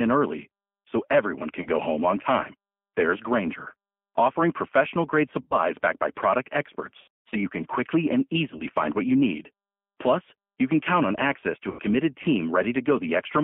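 G.729 codec damage runs through the whole speech clip and is plainly audible. The line is confined to roughly 200 Hz to 3.4 kHz, and the speech has the rough, synthetic grain of a coder that rebuilds the voice from a vocal tract filter, a pitch predictor and a few pulses per 10 ms frame, which fits 8 kbit/s G.729A. VoIP packet loss concealed by the speech codec occurs at five points:

1. 1.62 to 1.67 s, between "everyone can" and "go home on time", with about 30 ms missing, consistent with one lost packet.
2. 5.42 to 5.56 s, after "offering professional grade", with about 90 ms missing, pointing to three lost packets.
3. 7.02 to 7.36 s, between "backed by product" and "you can quickly and", with about 240 ms lost in scattered gaps over 300 ms and the longest run about 150 ms.
4. 8.57 to 8.65 s, with about 30 ms missing.
5. 11.70 to 11.83 s, with about 90 ms missing.

At each gap the decoder extrapolates from its last pitch and filter while lowering the gain, so the sound is stretched and fades. 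Because each frame builds on the previous one, the speech stays affected briefly after packets resume.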